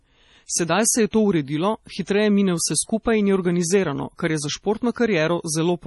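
From start to finish, the speech is band-limited and smeared, which is likely MP3 compression at heavy settings, consistent with a low bitrate around 32 kbps. Nothing sits above 11.5 kHz, so the top is dull, while weak high-frequency components flicker in and out between frames, giving sibilants a watery, swirly edge and blurring consonant onsets. On a spectrogram this shows as a hard flat ceiling at 11.5 kHz, with patchy, blocky holes speckling the upper bands below it.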